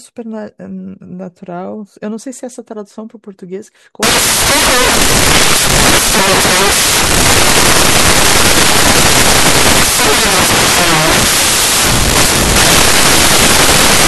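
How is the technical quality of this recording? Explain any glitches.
Technical quality collapses partway through: from 4.03 s to the end at 14.07 s the speech turns into loud hiss, caused by samples built from the wrong bytes. Each sample's bytes are being put together in the wrong order or at the wrong offset, so the rapidly changing low bits become the large part of every value, and the result is harsh broadband noise, close to white on the louder speech. Unlike ordinary background noise or clipping, it starts abruptly and buries the speech rather than sitting underneath it.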